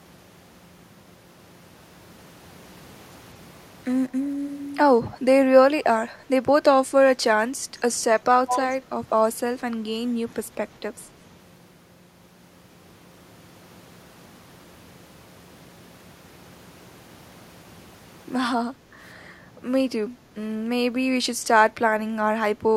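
Echo leak at 5.06–5.18 s and 8.47–8.59 s: a faint, then a much louder copy of the speech trails by 197 ms, likely far-end loudspeaker sound the echo canceller missed. Background gated by the echo canceller at 18.74–18.95 s: the room sound dips about 7 dB for roughly a fifth of a second while the canceller clamps the microphone.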